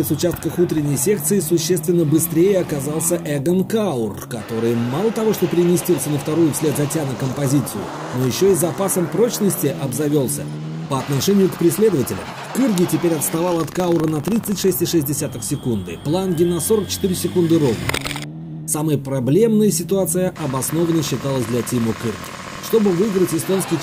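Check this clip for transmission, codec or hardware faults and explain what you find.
One fault shows up: buffer tearing from 13.44 to 14.74 s. Writer and reader crossed inside each period, splicing in a sliver of sound from a lap earlier, so there's a rattly 25 Hz buzz.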